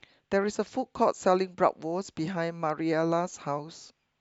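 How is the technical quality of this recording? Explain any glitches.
Nothing stood out on listening to this speech recording, and there are no glitches to explain.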